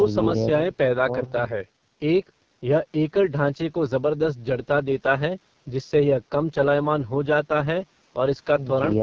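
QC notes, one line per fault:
throughout, AMR wideband (HD Voice) codec: speech sounds rough and raspy, with heavy coding damage consistent with the lowest AMR-WB rate, 6.6 kbit/s. Spectrogram shows smeared harmonics below 6.4 kHz, a diffuse noise-filled band from there to the top, and nothing above 7.4 kHz.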